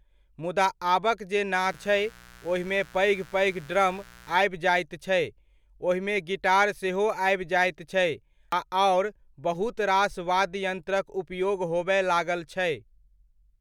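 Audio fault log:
1.61–4.41 s, mains buzz: a steady raspy 60 Hz buzz at about -25 dB under the speech, from switching spikes whose harmonics climb into the kilohertz range.
1.74 s and 8.52 s, compressed frames skipped: the audio jumps ahead about a tenth of a second, then about three tenths, consistent with dropped frames of roughly 93 ms.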